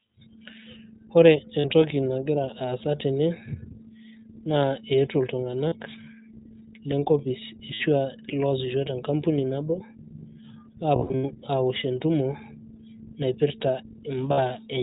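Throughout, the speech sounds thin and slightly rough and synthetic, with nothing above 4 kHz. This is the iLBC codec, which codes each frame's excitation independently; its damage is plainly audible, consistent with the 15.2 kbps mode using 20 ms frames.

Lost iLBC frames produce brief held, buzzy vowel-like fills at 1.60 to 1.66 s, 5.68 to 5.74 s, 7.74 to 7.82 s, and 14.32 to 14.40 s. Between 10.96 and 11.25 s a scattered cluster of these fills stutters, with the longest stretch lasting roughly 70 ms. In each case the decoder is repeating the last pitch cycle mixed with noise to cover missing packets, and the sound recovers almost immediately afterwards.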